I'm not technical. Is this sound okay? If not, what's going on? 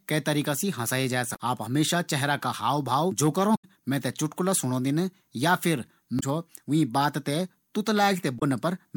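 No. Damaged data in a compressed stream causes brief glitches at 1.32–1.37, 3.54–3.65, 6.16–6.23 and 8.36–8.43 s as the player skips corrupted chunks. Unlike a clean dropout, each comes from the player losing its place in the stream and searching for the next good chunk.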